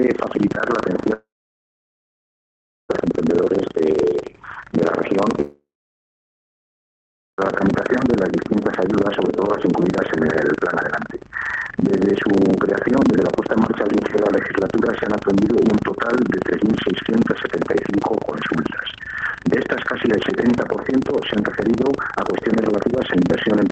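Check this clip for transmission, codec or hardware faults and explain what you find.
Two faults are present: a continuous buffer-tearing buzz and two long gaps.

Buffer tearing runs through the whole clip. The process writing the playback ring buffer and the hardware reading it have drifted so that they cross inside every period. A small slice of each buffer, roughly a sixth, still holds audio from about 70 ms earlier, with hard joins on both edges. That repeats at 25 Hz, which fits a 40 ms period, and gives a rattling, robotic buzz that follows the signal.

Long network dropouts occur from 1.13 to 2.91 s and from 5.41 to 7.40 s. Each gap is likely caused by packets failing to arrive. The receiver stretches the last sound into a brief fading fill, then leaves roughly 1.6 s and 1.7 s of near-silence. The audio resumes afterwards with about 1.76 s and 1.98 s of material simply missing. The call path's Opus coding and top end near 8 kHz can also be heard under these faults.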